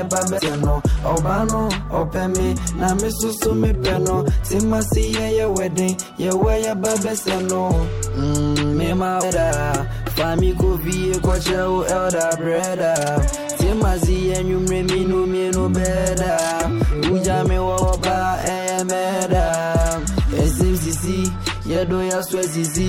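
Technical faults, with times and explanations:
0.37 to 0.40 s and 17.81 s, damaged data in a compressed stream: two brief blips break into the audio, the first lasting about 22 ms and the second a single short burst. At both points the encoded bitstream carries corrupted bytes, so the decoder misinterprets or rejects the affected frames, loses frame alignment and must hunt for the next valid header. The garbled output while resynchronising produces the blips.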